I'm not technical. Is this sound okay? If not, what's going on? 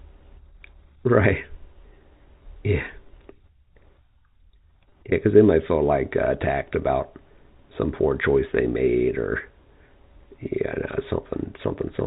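No, there's one small glitch. Around 4.90 to 4.92 s there's a moment of packet loss with pitch repetition. A tiny chunk of the audio, about 20 ms, went missing in transit, which fits a single lost packet. The receiver covered it by briefly repeating the last bit of the voice's pitch. Because the gap is so short, you'll hear it as a slightly held, buzzy blip rather than a dropout. The phone-line G.711 coding gives the usual narrow, telephone-like sound.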